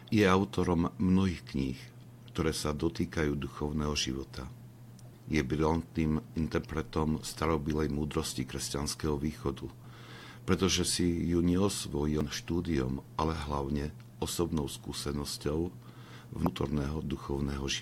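Two brief blips at 12.21 s and 16.46 s come from damaged data in a compressed stream: corrupted frames made the decoder misread them and lose sync momentarily.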